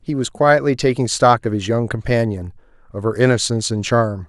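Speech recording; no technical faults detected anywhere in the clip.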